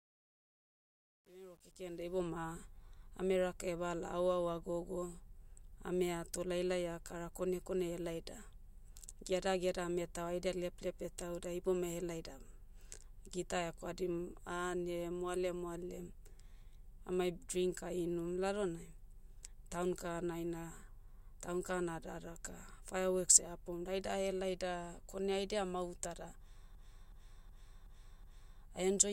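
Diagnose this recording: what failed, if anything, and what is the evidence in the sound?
The fade-in from 0.0 to 2.21 s shows truncation distortion on a fade at the sample-format conversion or gain stage. It sounds gritty, worst up to 2.12 s. The fade was computed at about 10 bits without dither, so quiet samples collapse into coarse steps.

A system hang loop at the driver or buffer stage runs from 26.75 to 28.61 s. One 0.37 s slice repeats five times, a stutter at 2.69 Hz. The host froze while the hardware kept replaying its ring buffer, which fits a 16384-sample buffer.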